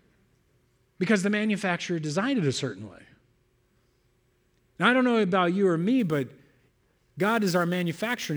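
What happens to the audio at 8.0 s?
Sample clock jitter is present at 8.0 s, part of a stretch running from 5.99 s, just after "know about you or", to the end of the clip. The converter's clock wanders, so each sample is captured slightly early or late, on the order of 10 microseconds. Where the waveform changes fastest, that timing error becomes an amplitude error roughly 25 dB below the speech, heard as a hiss or roughness that grows on loud and bright sounds and disappears in pauses.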